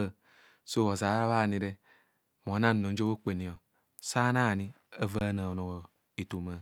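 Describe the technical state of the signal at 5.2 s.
At 5.19 to 5.21 s an underrun with held sample flattens the waveform at its last level for 21 ms, fitting a 1024-sample buffer. A spectrogram shows a blank gap where roughly 20 ms of audio was lost.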